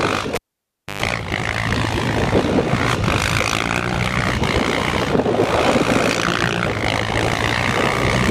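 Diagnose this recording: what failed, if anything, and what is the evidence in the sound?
A cable pulled and plugged in at the analogue wiring stage. At 0.35 s a sharp pop cuts the sound, followed by about 0.62 s unplugged, mostly near silence. Within that gap comes a roughly 0.12 s burst of 50 Hz mains buzz as only the plug tip makes contact, and a second pop restores the sound at 1.02 s. On a waveform, two spikes bracket a flat gap. A spectrogram shows broadband vertical lines at the pops and a short stack of 50 Hz harmonics within the gap.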